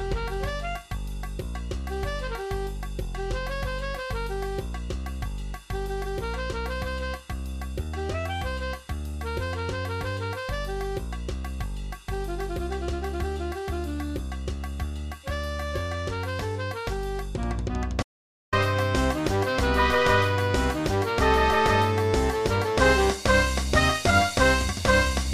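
An audio dropout to silence runs from 18.03 to 18.53 s. The sound stops abruptly mid-flow and is replaced by about half a second of silence, with no room tone or noise floor underneath, then resumes just as suddenly. The likely cause is a brief loss of the input signal, such as a momentary disconnection or mute, while recording carried on writing silence. Whatever occurred during that gap is missing entirely.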